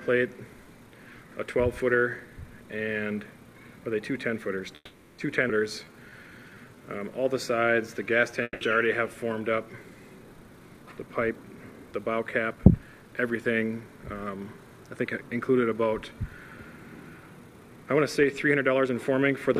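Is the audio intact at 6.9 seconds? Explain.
No. At 6.9 seconds the clip is inside a jitter buffer slow-down running from 5.84 to 7.21 s. The receiver's buffer was short of reserve, so it repeated single pitch periods to stretch the audio by 176 ms, leaving sound drawn out at 88% speed with unchanged pitch.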